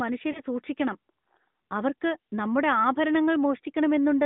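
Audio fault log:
0.32 to 0.41 s, lost AMR speech frames: a single 20 ms frame got dropped, so the decoder patched the gap by reusing the last good pitch and vocal tract settings at reduced gain. You hear that as a brief dip or warble in the narrowband speech.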